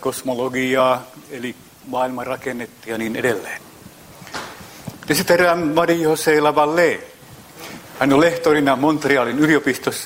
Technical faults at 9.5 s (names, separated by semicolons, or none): none